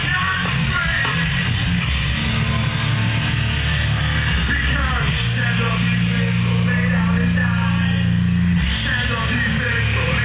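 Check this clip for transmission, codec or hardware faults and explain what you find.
No transmission, codec or hardware faults are present in this clip. The call path is audible as a narrowband ceiling with nothing above 4 kHz, which fits an ordinary G.711 mu-law telephone codec.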